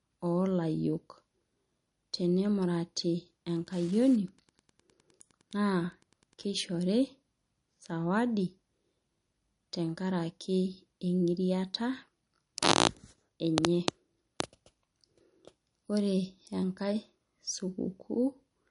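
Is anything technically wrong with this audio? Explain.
Yes, two faults are audible. Throughout the speech, the sound is plainly watery and swirly. Sibilants have a metallic, chirpy edge and consonant attacks are smeared, and nothing is left above 10.6 kHz. This is likely MP3 compression at a bitrate starved enough to fit about 42 kbps. Short of bits, the encoder cut the treble at a fixed point and dropped weak frequency components that flicker in and out from frame to frame, producing the swirling.

From 3.54 s to 6.74 s, a faint, steady ticking runs under the speech at roughly ten ticks a second, sitting around 35 dB below the speech. This is Wi-Fi interference. A nearby Wi-Fi radio sends a beacon every 102.4 ms, and the audio circuit picks up and rectifies each burst, turning the radio pulses into regular audible clicks for as long as the transmitter is active.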